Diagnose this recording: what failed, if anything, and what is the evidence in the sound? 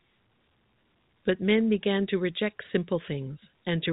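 Nothing stood out on listening: the speech carries the narrow band of an ordinary G.711 telephone line, and no stage in the chain gives any sign of having failed.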